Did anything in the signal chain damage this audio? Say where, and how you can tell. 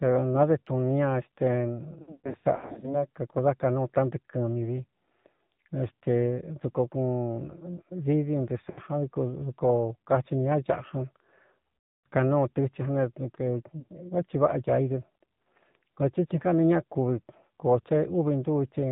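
Yes. Throughout, the speech is band-limited and buzzy, with nothing above 4 kHz and a synthetic edge. This is the AMR narrowband mobile codec at the codec stage. It samples at 8 kHz and rebuilds the voice from a vocal-tract model driven by sparse pulses. The plainly audible damage fits a low mode around 7.4 kbps, where too few bits remain for natural texture.

Further damage arrives in the network stage as lost AMR speech frames. Between 2.02 and 3.05 s, just before "kakūdá kanúu", the speech stutters and warbles over about 800 ms, with about 480 ms of it missing and the longest gap near 120 ms. Shorter smeared dropouts follow at 8.70–8.80 s (about 80 ms), 11.79–12.06 s (about 260 ms) and 13.80–13.84 s (one 20 ms frame). The decoder stretched the last good frame with falling gain, so sound drags and fades before returning rough.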